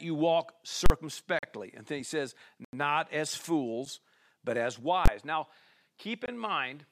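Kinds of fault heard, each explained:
Invalid numbers at full scale: At 0.86 to 0.90 s, and at 5.06 s just after "but as", a calculation produced invalid values that were pinned to maximum level. The 40 ms block gives a loud pop at each edge. The 20 ms one collapses into a single bang.
Block of digital silence: At 1.39 to 1.43 s, 2.65 to 2.73 s after "then he says", 3.85 s before "but as", and 6.26 to 6.28 s, the speech drops to silence with no fade. The gaps of 43 ms, 85 ms and 21 ms fit 2048-, 4096- and 1024-sample buffers at 48 kHz not being filled in time. The 8 ms one is a bare tick.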